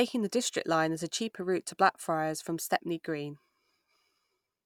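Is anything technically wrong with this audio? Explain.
No, the recording carries its speech without any audible technical defect from beginning to end.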